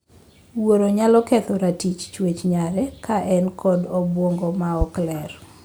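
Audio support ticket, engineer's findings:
Loud pop at 4.81–4.85 s, right after "ka en kod obuongo". Single sharp pulse, roughly 10 dB over the speech. Likely a plug or switch transient; speech carries on underneath.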